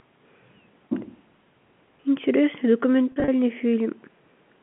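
Around 3.12 s to 3.28 s there's packet loss with pitch repetition. About 100 ms of audio went missing in short bursts spread over 160 ms, the longest only 40 ms. To fill each hole the receiver looped the last pitch period, so you get brief held, buzzy fragments rather than dropouts, which fits a handful of lost 20 ms packets. Around it, the telephone band of the G.711 line still tops out near 3.4 kHz.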